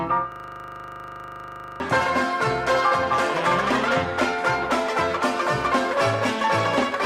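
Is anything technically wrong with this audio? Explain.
Yes. From 0.32 to 1.8 s there is a system hang loop. The computer or its audio driver stalled, but the sound hardware kept replaying the same 40 ms ring buffer, some three dozen times over. Because each repeat is identical and so short, it fuses into a steady, droning buzz at 25 Hz instead of a distinct stutter. About a second and a half of the real audio is replaced by this repetition.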